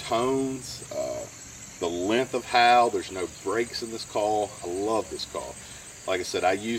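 From 0.86 to 2.19 s the sound slows by 6% and drops 108 cents, about a semitone flat, then snaps back to normal speed and pitch. This is likely a drift correction step: clock-matching software changed the playback rate in one jump to rebalance its buffer.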